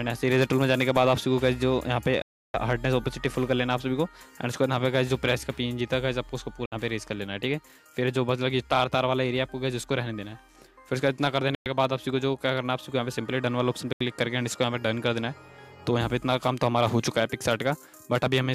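The sound drops to dead silence four times: about 320 ms at 2.22 s, 60 ms at 6.66 s, 110 ms at 11.55 s and 80 ms at 13.93 s, then carries on. It's likely a Bluetooth stall, with delayed packets briefly emptying the headphones' buffer.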